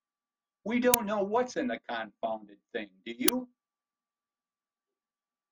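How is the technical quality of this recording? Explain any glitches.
The speech has two quick glitches, both from an uninitialised buffer. At 0.94 s and 3.28 s, a roughly 5 ms block played before any audio had been written to it. Leftover memory came out as samples, so each one is a loud crack.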